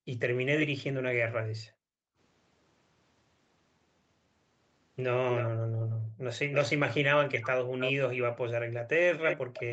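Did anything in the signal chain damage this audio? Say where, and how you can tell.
Yes. Background gated by the echo canceller, in call processing: room noise drops by about 40 dB at 0.0, 1.33–2.17, 5.5–6.26 and 8.61–9.54 s, visible as near-empty spectrogram gaps.

Echo leak, likely from residual loudspeaker echo: delayed copies about 5–10 dB below the speech trail it by 316 ms at 0.59 and 5.35 s, then 288 ms from 6.52 s to the end, showing as ghosted, repeated waveform shapes.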